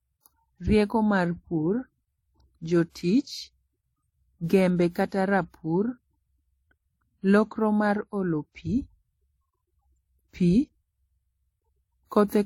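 Throughout, the speech carries layered codec artefacts, with nothing above 18.4 kHz. This likely comes from transcoding between lossy codecs: MP3, then HE-AAC, then WMA.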